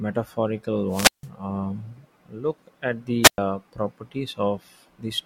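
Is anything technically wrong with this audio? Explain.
Yes, there are two wireless microphone squelch dropouts, at 0.89 to 1.28 s and 3.23 to 3.38 s. The radio link faded until the receiver's squelch gated the output. Each brings a short surge of hiss, then near silence for about 161 ms and 110 ms before the speech returns.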